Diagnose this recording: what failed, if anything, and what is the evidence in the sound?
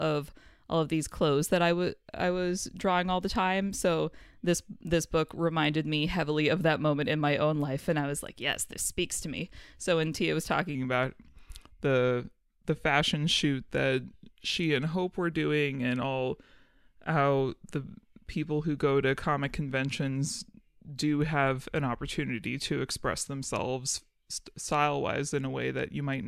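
From 10.75 s to the end, the speech plays at 0.893 times its recorded speed, about two semitones lower, slower and deeper. Pitch and tempo shift together abruptly: a section at the wrong speed, likely from playback or editing against a mismatched sample clock.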